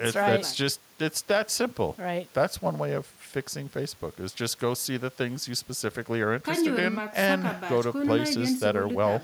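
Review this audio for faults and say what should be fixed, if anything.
Nothing needs fixing: the speech signal is technically sound throughout, with an intact, continuous waveform.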